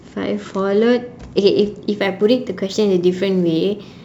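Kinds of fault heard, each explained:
Sample clock jitter: the converter's clock wobbles, so each sample gets grabbed a touch early or late, on the order of a couple of microseconds here. The error scales with how steeply the waveform is moving, so from about 1.96 s to the end you get a faint hiss and roughness riding on the speech, sitting something like 40 dB under it, strongest on loud and bright sounds and gone in the pauses.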